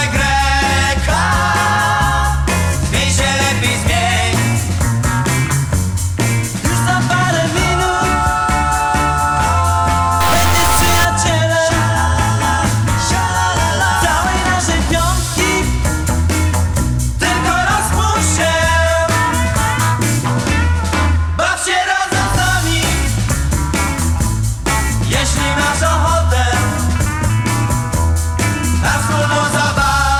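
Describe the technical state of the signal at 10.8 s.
At 10.8 s the signal has a stuck bit, from 10.20 to 11.05 s, likely a high-order bit, with steps around -10 dBFS. It sounds harshly buzzy and, unlike clipping, fills quiet moments with noise.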